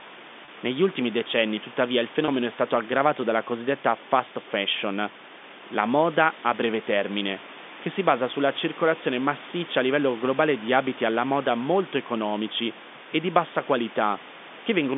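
Packet loss with pitch repetition at 0.45 to 0.48 s and 2.25 to 2.28 s: each 30 ms gap, consistent with a single lost packet, is bridged by repeating the last pitch period, giving a brief held, buzzy tone.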